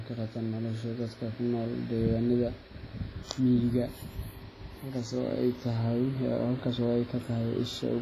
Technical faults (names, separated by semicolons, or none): WMA compression